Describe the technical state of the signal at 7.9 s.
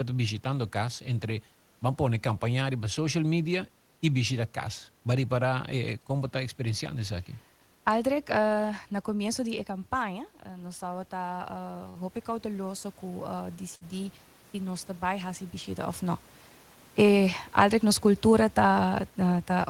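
At 7.9 s the signal is intact, with no dropout, distortion or other system fault, only the room's own background noise under the speech.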